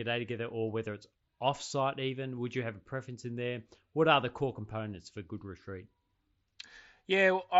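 At 2.37 s, just after "whether it's offsite even", a brief concealed Bluetooth headset packet loss occurs. About 7.5 ms goes missing, which fits a single lost frame, and the receiver patches the gap with a copy of the preceding waveform. The result is a barely noticeable blip within the mSBC wideband sound.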